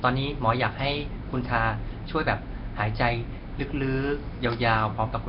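Throughout, the speech sounds rough, hissy, smeared and underwater, with nothing above 5.3 kHz: likely Nellymoser compression, starving weak bands and filling them with noise.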